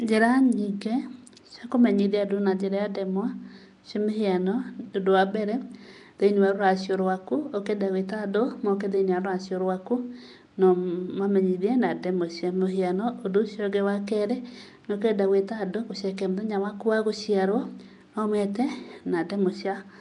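It's a speech clip with a rough, hissy halo and a smeared, underwater feel throughout, plus nothing above 10.6 kHz. That's likely Nellymoser compression, where weak bands get no bits and are refilled with noise, which fits a rate around 44 kbps.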